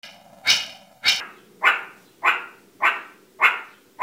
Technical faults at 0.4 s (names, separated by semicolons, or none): planar audio read as interleaved